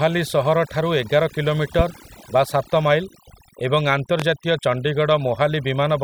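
Overdone noise removal affects the whole clip. A noise reduction stage was pushed too hard. It cuts individual frequency bands to almost nothing whenever they sit close to its noise estimate. Quiet parts of the speech fall below that line and vanish with the noise. The pauses drop to near silence, flecked with small twinkling artefacts.

At 4.20 to 4.23 s comes a loud pop. It is a single sharp burst, roughly 15 dB above the speech. The speech carries on underneath it without a break. The likely cause is a sudden voltage step or pulse entering the signal path, such as a plug, a switch, static discharge or a driver glitch. The circuitry downstream shaped that pulse into a brief, hard crack.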